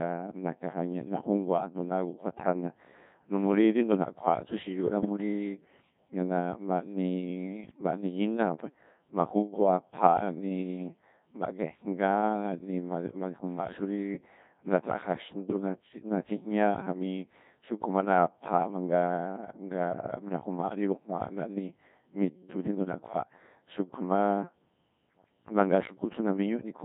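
The whole recording goes through the Codec 2 vocoder, and it's heavily damaged. The decoder rebuilds the speech from sine waves using only pitch, voicing, energy and a spectral envelope, so the original waveform is gone. What you hear is a robotic, buzzy voice, and that thin, synthetic quality fits a very low-rate mode around 1.6 kbit/s.

On top of that there are two bursts of bit errors on digital voice radio. The first, from 5.00 to 5.06 s, is brief and sounds like a couple of vocoder frames got scrambled. The second, from 7.64 to 7.81 s, runs longer and points to about four frames hit. At this rate every bit steers a whole frame's pitch, level or timbre. With roughly 5 percent of bits flipped, the voice lurches in pitch and loudness and breaks into warbly, bleepy gibberish.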